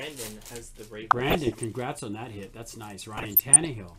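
DAB burbling occurs from 1.01 to 1.64 s and again from 3.17 to 3.67 s. Bit errors at a fraction of a percent slip past error correction and corrupt sub-band samples and scale factors, giving short blips of noise in single sub-bands and brief jumps in sub-band level. A spectrogram shows isolated bands flashing bright for single frames.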